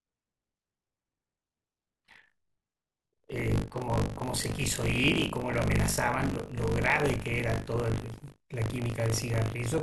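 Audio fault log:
throughout: buffer tearing. A robotic 50 Hz buzz rides on the speech, sounding only while there is signal. Writer and reader of the ring buffer have slipped, so about a fifth of each 20 ms period replays audio around 40 ms old, with hard joins each side.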